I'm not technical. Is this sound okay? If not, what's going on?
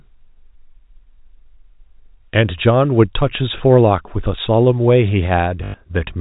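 No. There is packet loss with last packet repeated. Pieces of the sound went missing, so the player replayed the last piece to fill the gap. At 3.58 to 3.60 s, this causes a small blip. From 5.64 to 5.74 s, repeated pieces make a brief robotic buzz.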